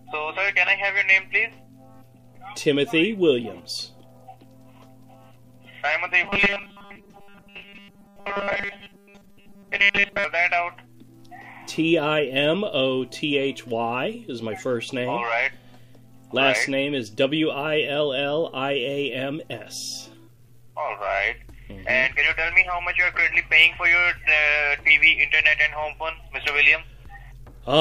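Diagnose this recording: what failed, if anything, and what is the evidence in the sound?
From 6.24 to 10.24 s the sound turns into a rigid, metallic buzz fixed at 200 Hz, still loosely tracking the underlying contour. This is robotic sound from repeated short buffers, likely a driver or buffer stage starving for input. When fresh audio failed to arrive in time, the last block was replayed instead, most of the time across that stretch, while real audio was skipped. The 200 Hz buzz points to a loop about 5 ms long.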